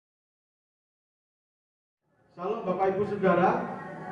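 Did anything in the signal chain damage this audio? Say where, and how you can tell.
No, nothing in the signal chain audibly damaged this audio, and no stage shows any sign of having altered the signal.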